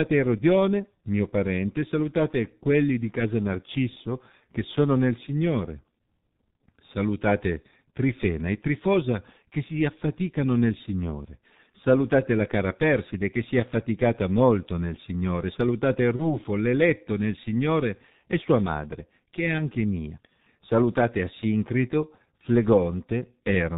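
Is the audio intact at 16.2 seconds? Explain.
No, there's a VoIP packet loss concealed by the speech codec right there, running from about 16.16 to 16.37 s, just before "l'eletto nel". The gap is short, which fits a single lost 30 ms frame. The decoder filled it by repeating its last pitch and filter settings at a falling gain, so you hear the sound smear into a buzzy tone or coloured noise that fades. Because each frame builds on the previous one, the voice stays weak or distorted for a while after the packets return, which is why the disturbance lasts about 0.2 s.

That moment also carries the G.723.1 codec damage heard across the whole clip, which is heavy and fits a bitrate around 6.3 kbit/s. The codec passes nothing above 4 kHz and its speech model updates only every 30 ms, so the speech around the dropout sounds muffled and hoarse, with consonants blurred together.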